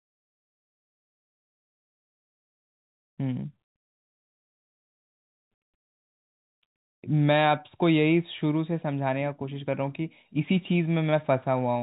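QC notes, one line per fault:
No faults turn up here; the speech carries the usual G.711 telephone sound, with nothing above 4 kHz, and that's simply how the line works.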